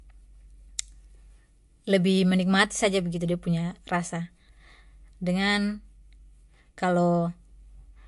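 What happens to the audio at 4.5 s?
At 4.5 s the speech carries the same damage heard across the whole clip, likely from MP3 compression. Nothing sounds above 11.3 kHz. Weak frequency lines switch on and off between frames, giving a watery, swirly quality and metallic chirps on s sounds. This points to a low bitrate, near 49 kbps.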